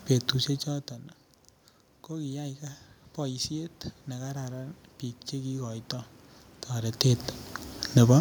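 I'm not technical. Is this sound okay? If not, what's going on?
No. From 2.09 to 5.91 seconds there's automatic gain rising. The system heard quieter sound and slowly turned itself up, so voice and room noise swell together.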